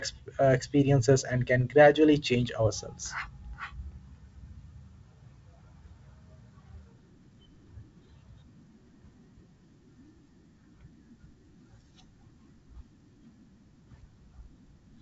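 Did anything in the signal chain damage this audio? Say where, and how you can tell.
No, nothing damaged this audio.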